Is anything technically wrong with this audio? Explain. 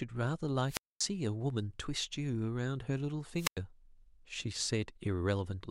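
Yes. From 0.67 to 1.01 s and 3.35 to 3.58 s, hiss swells before the speech cuts to near silence for 239 ms and 97 ms: wireless microphone squelch dropout, where the fading radio signal trips the receiver's mute.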